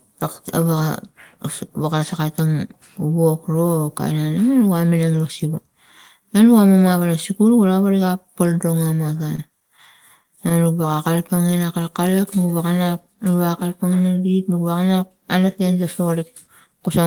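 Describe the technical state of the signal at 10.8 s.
Scattered short gaps run from 9.07 to 11.39 s, so 10.8 s falls inside this stretch. Around fifteen small packet losses or late arrivals are spread across the span, none longer than about 30 ms. The receiver papered over each hole by carrying the preceding sound forward, filling roughly 150 ms in total, around 7 percent of the stretch. The speech stays largely clear, but brief ticks, smears and little hiccups break into it here and there.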